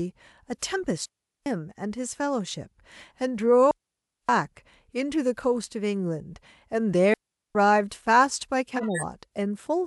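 Digital wireless dropouts occur at 1.06 to 1.46 s, 3.71 to 4.29 s and 7.14 to 7.55 s. Each time, the receiver lost too much of the link and muted for about 0.40, 0.58 and 0.41 s. The holes are clean and near-silent, with no hiss or static burst at either edge, which separates them from an analogue radio dropout. At 8.76 to 9.03 s, a corrupt frame was decoded: damaged bits in a handful of consecutive compressed frames were played anyway, so energy lands at the wrong frequencies. The result is a burst of misplaced sound peaking around -15 dBFS. It adds sound rather than removing it, unlike the dropouts.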